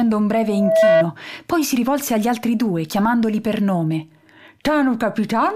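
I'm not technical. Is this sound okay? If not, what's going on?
No. From 0.39 to 1.05 s there is loudspeaker feedback squeal: a single 650 Hz tone swells over about 0.4 seconds, unlike a steady hum, and stops just before "poi si rivolse agli".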